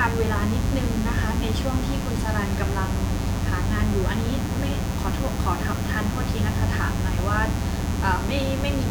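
Mains buzz runs through the whole speech clip. Sharp switching spikes from a dimmer, rectifier or unshielded cable land twice per 60 Hz cycle, spraying harmonics up into the kilohertz range. The result is a steady, raspy buzz sitting only roughly 10 dB under the speech.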